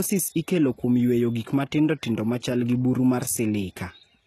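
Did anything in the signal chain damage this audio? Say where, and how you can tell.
Yes, at the codec stage: s sounds are gritty and metallic throughout, likely HE-AAC compression near 16 kbps. A spectrogram shows patchy, copied treble ending at 12.4 kHz.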